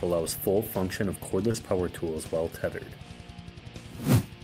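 At 1.51 to 1.56 s there is a short concealed packet loss. About 20 ms of audio missed the decoder's deadline, and the receiver bridged it with 27 ms of sound extrapolated from what came before, then crossfaded back, leaving a brief smeared wobble.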